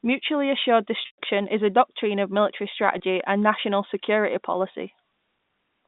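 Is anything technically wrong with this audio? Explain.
Yes, there is packet loss with pitch repetition. The worst is at 1.02 to 1.18 s, just before "is a doctrine of": about 140 ms went missing over 160 ms, the longest run 120 ms. Shorter hits come at 2.98 to 3.00 s, between "a doctrine of military" and "and national security", and at 4.72 to 4.74 s, after "and national security". Each short one is about 20 ms, which fits a single lost packet. The receiver fills each hole by repeating the last pitch cycle. At 2.98 s and 4.72 s that sounds like a brief buzzy hold. The long gap fades to silence and the audio returns with a quick cross-fade. Plain dropouts would go straight to silence or clicks, with no sustained buzz. The G.711 telephone band, about 150 Hz to 3.7 kHz, can be heard throughout.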